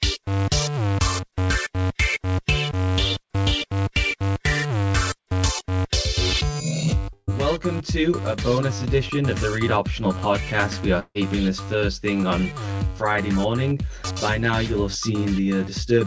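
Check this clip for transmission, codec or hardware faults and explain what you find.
Two transmission faults are audible, both short gaps where audio stops arriving and the receiver fills in; the call-codec band limit is also audible, with nothing above 8 kHz, which fits a G.722 wideband path.

From 7.13 to 7.30 s there is a burst of packet loss. About 150 ms of audio never arrived, and the receiver stretched the last sound across roughly 146 ms, letting it fade, with about 40 ms of near-silence before the audio resumes further on.

From 10.99 to 11.18 s a similar gap occurs, likely a long network dropout. Around 150 ms is missing: the preceding sound is extended as a decaying buzz or hiss for about 154 ms, then about 50 ms of silence follows before the audio picks up past the lost section.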